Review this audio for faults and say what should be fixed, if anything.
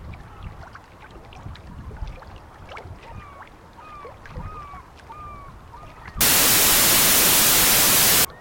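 From 6.21 s to 8.25 s there is a wrong sample width fault: loud broadband noise buries the original sound, which plays at half speed and an octave low. This fits 32-bit integer data read as 16-bit, splitting each sample into two mismatched halves. Fix by declaring and checking sample format explicitly at every read and write boundary.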